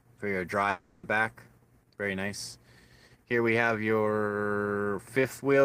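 The audio is interrupted by a long network dropout from 0.69 s to 1.05 s. Across that 0.36 s stretch the original sound stops and is replaced by a continuation of the last received sound, a buzzy, smeared tail that decays rather than dropping to silence. When the signal resumes at 1.05 s, roughly a third of a second of material is simply gone. This is likely packet loss, with the receiver's concealment padding the gap.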